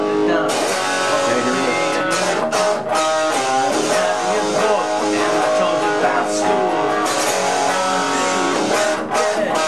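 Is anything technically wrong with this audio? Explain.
No, there is nothing technically wrong with this audio. No dropouts, distortion or other faults can be heard anywhere in it.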